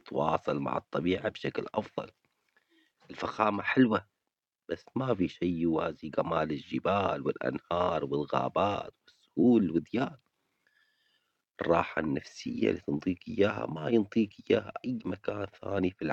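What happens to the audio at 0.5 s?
At 0.5 s the audio is intact, with no dropout, click, distortion or other audible fault at that moment.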